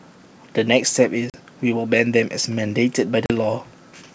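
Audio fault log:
1.30–1.36 s and 3.26–3.33 s, packet loss on an ADPCM call: each time about 40 ms of speech, roughly two packets, drops out into silence. The waveform shows a flat gap with abrupt edges, and the spectrogram shows a blank vertical strip across all bands. When the speech resumes, the decoder's adaptive predictor and step size no longer match the sender's, so the first few tens of milliseconds come back slightly distorted before the decoder resettles.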